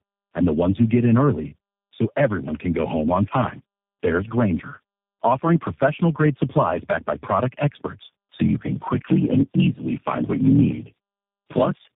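Tandem speech coding runs through the whole clip, from 0 s to the end. The speech passed through four speech codecs in a row, each re-encoding the previous one's degraded output. The losses stack: nothing above 3.7 kHz survives, and the speech sounds rough, muffled and warbly.

Block size mismatch (padded) starts at 8.34 s, right after "backed by product experts", and lasts to the end. Short writes into larger reads, which fits a 1024-sample read, leave zero-filled gaps in every block. This gives a 43.1 Hz buzz, and the speech plays at 0.861 times normal speed with its timbre unchanged.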